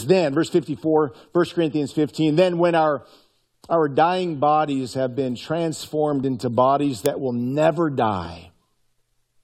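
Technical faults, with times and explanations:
6.24 s, overlap between stream segments: a tiny skip just before "into bodies that will". Two segments' time stamps overlapped, so the player cut 7 ms of speech that was never doubled, leaving an abrupt waveform jump at what sounds like a segment boundary.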